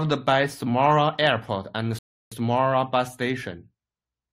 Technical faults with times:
1.99-2.32 rebuffering stall

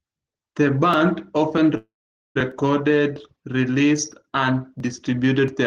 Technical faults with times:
1.77-2.37 call audio freeze

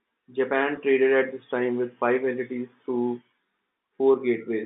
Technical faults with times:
0.76 packet loss with pitch repetition

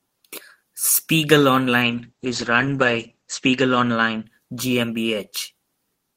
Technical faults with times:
1.82-5.39 call bitrate drop

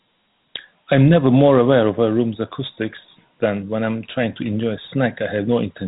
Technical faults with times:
0.00-5.87 Dialogic VOX ADPCM

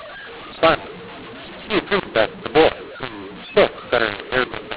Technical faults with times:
0.00-4.77 mu-law and A-law mixed up

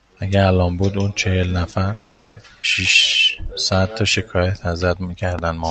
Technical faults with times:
1.93-2.38 call audio freeze
2.62-2.65 skip ahead
3.32-4.78 jitter buffer slow-down
5.39-5.41 loud pop

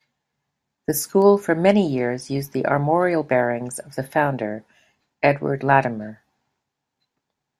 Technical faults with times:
1.22 bit error spike

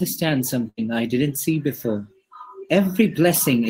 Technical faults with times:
0.69-0.79 burst of packet loss

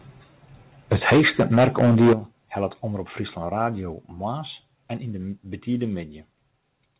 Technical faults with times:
0.91-2.13 microphone overload
1.13 microphone volume stepped down
2.13 microphone volume stepped down
3.93 microphone volume stepped down
6.00 microphone volume stepped down

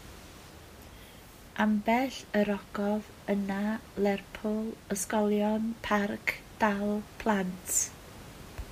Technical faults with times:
none

